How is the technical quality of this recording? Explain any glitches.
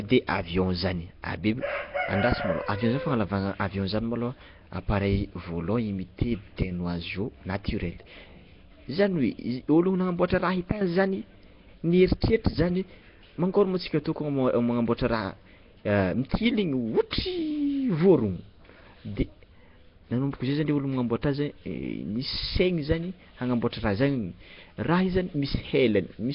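Quality's pretty rough, honestly. The speech is affected by one fault running the whole way through. It sounds like Nellymoser compression, the old Flash microphone codec, likely squeezed hard at something near 22 kbps. It codes short blocks on a tight, fixed bit budget, so weaker bands get dropped and refilled with noise. You hear a hissy, grainy halo, a smeared underwater feel, and nothing above about 5.3 kHz.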